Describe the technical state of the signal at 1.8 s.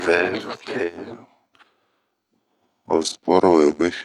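Wrong sample rate is in effect at 1.8 s, within a span running from 1.1 s to the end of the clip. The samples are being played back slower than they were captured, with no conversion, which fits 48 kHz material played at 44.1 kHz. Speed and pitch drop together: the speech runs at 0.919 times its normal pace and sits about 1.5 semitones low, sounding slightly deeper and more drawn out.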